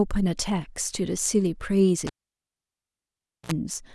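Speech, with a cable pulled and plugged in from 2.07 to 3.52 s: a pop, about 1.4 s of near silence, a 55 ms burst of 60 Hz mains buzz as the plug tip touches first, then another pop. The paired pops and hum distinguish it from a clean digital dropout.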